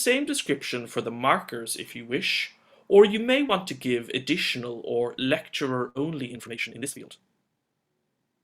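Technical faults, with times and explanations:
3.47–3.51 s, short concealed packet loss: About 20 ms of audio failed to reach the decoder in time. The receiver covered the hole by extending the preceding sound for roughly 15 ms, copying its pitch if it had one or substituting shaped noise, then crossfaded back into the real signal. Because the patch is so brief, it comes across as a tiny smear or wobble.
5.89–5.97 s, burst of packet loss: About 60 ms of audio went missing, either several consecutive packets or one long one, none arriving in time to be played. The receiver stretched the last sound across about 59 ms and faded it as the gap went on, so a pitched sound turns into a held buzz and an unpitched one into a fading hiss. The audio then picks up further along, with the stretch in between simply gone.
6.29 s to the end, time-stretched section: From here the pace jumps abruptly to about 1.79 times the earlier rate, yet the pitch does not rise with it. 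That combination points to software that likely compressed this stretch to fit a shorter length by cutting out small slices of the waveform rather than playing it faster. The removed slices leave the audio sounding rushed, and the pitch stays where it was.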